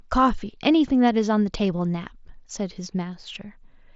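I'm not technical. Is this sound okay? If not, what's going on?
No, there is one tiny glitch at 1.78 s. It is concealed Bluetooth headset packet loss. One short piece of sound, about 7.5 ms, never reached the phone. The phone filled the gap by copying recent speech, so it is barely noticeable.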